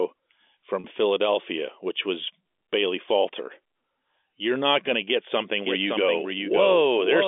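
Telephone-band speech, carried through G.711 A-law coding with the expected 300 Hz to 3.5 kHz line band, has two faults. From 0.80 to 0.84 s there is packet loss with pitch repetition. About 40 ms of audio is missing, which fits two lost 20 ms packets. The receiver concealed the gap by repeating the last pitch period, so the sound briefly holds on one slightly buzzy, static tone instead of moving on, and then rejoins the live signal. From 5.65 s to the end, a doubled audio track is audible. A second full-band copy of the speech runs about half a second behind the original at roughly 5 dB lower level. It arrives without decay or room colouring and starts abruptly, so it sounds like a distinct overlapping repeat rather than an echo. The likely cause is the same signal being captured again through a slower path and mixed back in.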